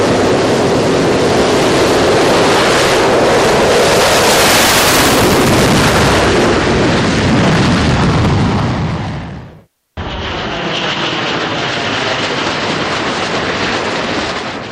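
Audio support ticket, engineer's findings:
No faults found in this audio.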